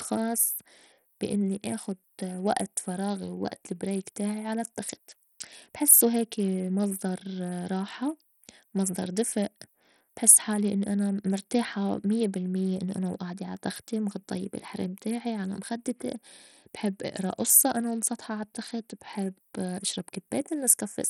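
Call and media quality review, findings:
Gritty, coarse-grained speech throughout, treble flickering in and out with a rough aliased edge, no content above 18.4 kHz. Likely Bluetooth SBC compression at a starved bit pool, fitting about 64 kbps: upper sub-bands get almost no bits, the rest coarsely quantised.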